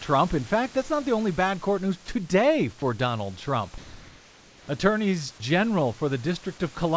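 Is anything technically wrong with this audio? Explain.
Yes. Comfort noise in place of the background appears from 3.78 to 4.68 s, a 0.9 s stretch of pause where the room's real background, sitting about 27 dB below the speech, gives way to a smooth, featureless hiss at the same level. The likely cause is discontinuous transmission: the sender's voice detector stopped sending audio, and the receiver synthesised noise roughly matching the background's shape until the speech resumed. The call path's band limit, with nothing above 8 kHz, is consistent with a G.722 codec.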